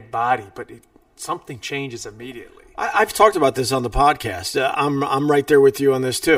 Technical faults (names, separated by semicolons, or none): channel delay (comb filtering)